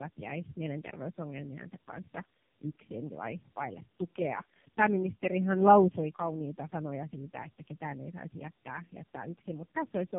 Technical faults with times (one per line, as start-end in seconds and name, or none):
0.00-10.18 tandem speech coding